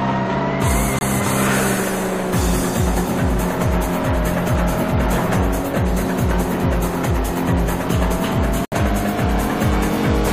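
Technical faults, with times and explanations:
0.99–1.04 s and 8.65–8.73 s, corrupt frame muted: The sound drops abruptly into silence for about 56 ms, then about 78 ms, which fits two and three lost frames. The decoder rejected damaged compressed frames, and the player filled the gaps with silence. Timing stays intact.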